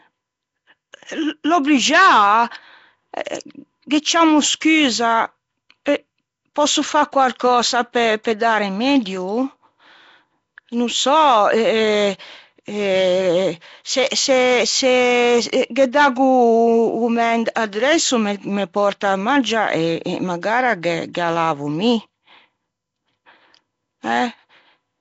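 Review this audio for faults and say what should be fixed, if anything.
A rough, hissy halo and a smeared, underwater quality sit over the speech from start to finish, and nothing is heard above 7.7 kHz. The likely cause is Nellymoser compression: its fixed two bits per sample leave weak bands unfunded and filled with noise. The plainly audible damage fits a low bitrate of around 32 kbps.

At 8.24 s, just after "pòsso fâ quarcösa", a brief hiss of about 14 ms precedes a sharp attack, which sounds softened and smeared. This is pre-echo. The codec spreads quantisation noise across its whole block, so noise sized for the loud onset also fills the quiet instant before it.

Fixing both means capturing or re-encoding from the original source with a modern wideband codec at a higher bitrate, which avoids Nellymoser's starved bands and its block-spread noise.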